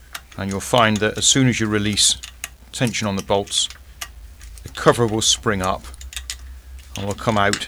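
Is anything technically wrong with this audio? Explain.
Yes. Throughout the clip there is grainy distortion that rises and falls with the sound itself, with quiet passages turning gritty and the softest moments sputtering or collapsing to silence. This is likely low bit depth without dither: the audio appears reduced to about 9 bits and rounded without added noise, so the rounding error tracks the waveform instead of forming a steady hiss. That error sits roughly 35 dB below the signal.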